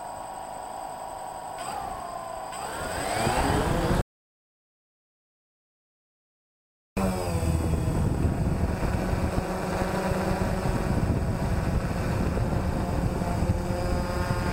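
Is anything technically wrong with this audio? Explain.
Yes. There is an audio dropout to silence from 4.01 s to 6.97 s. The sound cuts out abruptly and returns mid-flow. The gap is silent, with no room tone, for about 2.95 s. The input was likely lost while silence kept being written.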